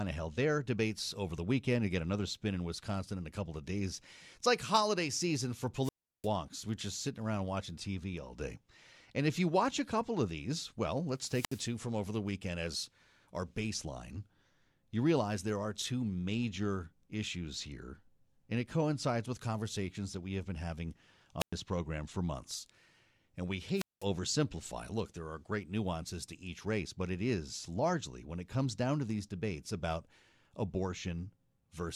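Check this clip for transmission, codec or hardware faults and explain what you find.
One fault recurs. Wireless microphone squelch dropout at 5.82, 11.18, 21.39 and 23.74 s: the radio link fades, hiss rises, and the receiver's squelch mutes the speech for 66 to 350 ms.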